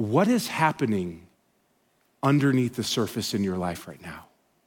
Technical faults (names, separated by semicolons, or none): loose connector crackle